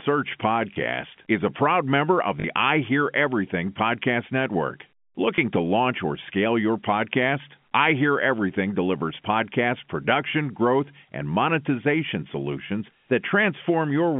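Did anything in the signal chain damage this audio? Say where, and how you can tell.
Yes, packet loss with last packet repeated at the network stage: 0.74–0.76 s before "is a proud member", 2.40–2.44 s after "a proud member of", and 5.36–5.38 s before "to launch or scale". Each gap is refilled by replaying the previous chunk out of step with the pitch, giving small blips at the single-packet losses and a short robotic stutter at 2.40 s, whose lengths fit 20 ms packets.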